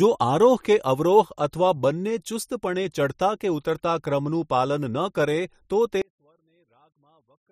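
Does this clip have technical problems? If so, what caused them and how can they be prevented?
Yes. From 6.02 s to the end at 7.52 s the speech drops by about 38 dB and turns faint, likely because one channel is inverted, so the shared centre signal cancels when summed to mono. Check channel polarity before mono fold-down.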